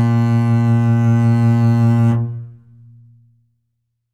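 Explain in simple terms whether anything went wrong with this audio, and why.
Nothing went wrong that I could hear: listening to this music, nothing stood out as a problem at any point.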